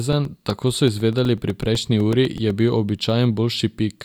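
From 0.13 to 2.50 s, periodic USB or driver dropouts blank roughly 2 ms of the speech to silence every 0.125 s, producing a steady ticking.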